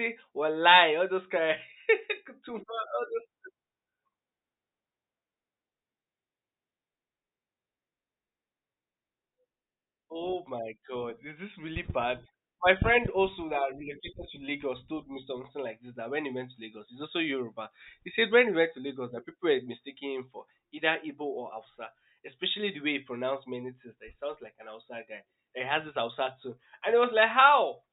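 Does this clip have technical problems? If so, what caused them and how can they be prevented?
No, the speech recording shows no technical faults anywhere in the signal, so there is nothing to trace back to a cause or guard against.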